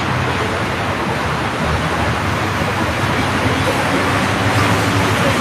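No technical faults can be heard at any point in this recording of sounds.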